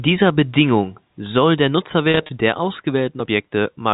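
Between 2.11 and 2.29 s there is packet loss with pitch repetition: about 110 ms of audio goes missing in short gaps scattered across 180 ms, the longest only 30 ms, which suggests small packets of around 10 ms. At each gap the receiver replays the last pitch period to cover the hole, so the speech briefly takes on a held, buzzy quality. The gaps are too short for the fade-out to reach silence. The band limit of the G.711 telephone coding remains audible through this stretch.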